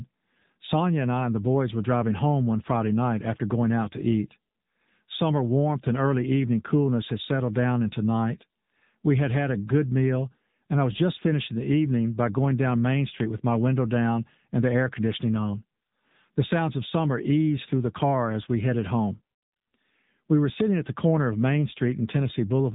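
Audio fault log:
Throughout, AMR narrowband mobile codec: the speech sounds thin, buzzy and somewhat synthetic, with nothing above 3.8 kHz. This phone codec rebuilds the voice from a vocal-tract model driven by sparse pulses, and its plainly audible coarseness fits a low mode near 7.95 kbps.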